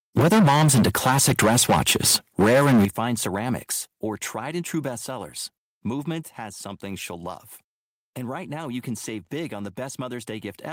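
From 0.17 to 2.85 s the speech has harsh, crackling edges, likely microphone overload: input about 12 dB too hot, with roughly a fifth of samples flattened against the converter ceiling. On the waveform the peaks look squared off, and the spectrogram shows smeared high-frequency splatter. A microphone volume stepped down event, likely automatic gain reduction, drops the level by 4 dB at 0.19 s, by 12 dB at 2.85 s just before "ceramics or tried and", and by 4 dB at 3.87 s before "or tried and true". Each cut shows as an abrupt step in waveform height.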